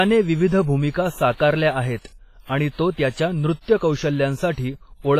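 From start to finish the speech carries heavy damage that sounds like WMA compression, likely at a low bitrate near 24 kbps. The sound rings and smears, with each syllable trailing a washy tail. A hiss rises and falls with the signal. Weak spectral detail drops out. Nothing is heard above about 15.3 kHz. Long transform blocks spread the coarse quantisation noise across tens of milliseconds.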